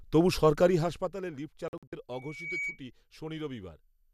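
From 0.58 to 1.28 s, a rapid ticking rides on the speech as its level falls by around 15 dB. This is zipper noise: the gain drops in unsmoothed 2 dB steps, roughly fifteen a second, and each jump leaves a small click.

Between 1.68 and 1.93 s, the speech breaks into several short silent holes. Together they remove 144 ms of audio spread over about 240 ms, and the longest single gap is 48 ms. This is a digital broadcast dropout. The receiver muted whenever frames arrived corrupted or missing, which fits about six lost frames, and the speech sent during those gaps is gone.

At 2.12 s, a pure tone near 2.3 kHz begins to swell. Within half a second it becomes a squeal sitting about 5 dB above the speech, and it stops at 2.80 s. This is loudspeaker feedback squeal: the microphone picked up its own loudspeaker, and the loop's gain exceeded unity at that frequency.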